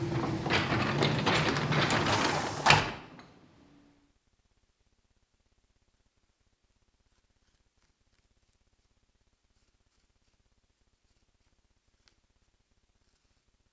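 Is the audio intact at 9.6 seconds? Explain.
Yes, the audio at 9.6 seconds is intact, with no fault to be heard at that moment.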